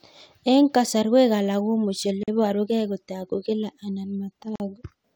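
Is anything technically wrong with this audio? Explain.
Yes. Gaps at a join of encoded pieces occur at 2.23 s and 4.56 s: separately encoded segments keep their encoder delay and padding, leaving an abrupt gap of about 44 ms whose edges are smeared by the codec, so the silent part is shorter, before the speech resumes.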